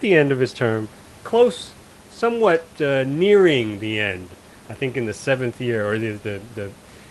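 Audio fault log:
No faults are heard anywhere in the speech. The call path's Opus coding can be heard with the high end ending near 12 kHz, which fits a bitrate around 32 kbps, and the room noise sits about 24 dB below the speech.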